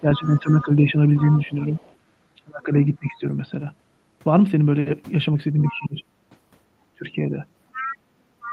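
A speech recording carried over a call path with an Opus-style codec, with its band topping out around 12 kHz, shows two recurring faults. Speech suppressed in double talk appears from 0.0 to 1.72 s (dips of about 10 dB), 2.37 to 3.25 s (about 25 dB), 5.62 to 6.02 s and 6.95 to 7.33 s (about 20 dB each). The talker's level is pulled down in chunks while a second voice is present, which points to an echo canceller that could not separate the near voice from loudspeaker echo. That is a likely cause rather than a certainty. Here the voice dips, loses its high end or cuts out in pieces. The other side's voice leaking through is audible at 0.25 to 0.62 s, 1.17 to 1.95 s, 5.61 to 5.69 s and from 7.72 s to the end. It is a faint second voice about 20 dB under the talker, rising to about 15 dB below in the final stretch. It is likely residual loudspeaker echo that the canceller missed. Unlike room reverberation, it is a distinct, separate voice, not a smeared tail of the talker's own sound.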